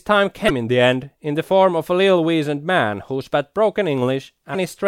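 At 0.46 to 0.50 s and again at 4.51 to 4.55 s, damaged data in the compressed speech stream produces brief glitches: the decoder misreads corrupted frames and resynchronises.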